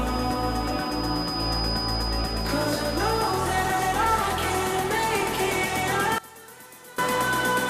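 From 5.10 to 5.23 s there is DAB burbling: a short burbling patch over the programme. Residual bit errors, at a low rate of about 0.07 percent, evaded error correction and corrupted scale factors and samples, making individual sub-bands jump in level across what sounds like about eight frames.

From 6.18 to 6.98 s the level drops by about 21 dB and the centre content falls to a faint residue. The likely cause is one channel inverted, with reversed polarity making the common signal cancel when the two channels are summed to mono.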